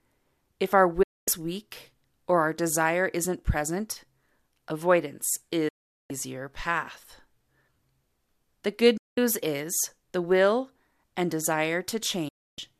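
Speech cuts out four times in a digital broadcast dropout: 1.03 to 1.28 s after "if our", 5.68 to 6.11 s, 8.97 to 9.18 s before "is the will and", and 12.28 to 12.59 s. Bad frames make the receiver mute behind a quick 8 ms fade, so those stretches are simply gone.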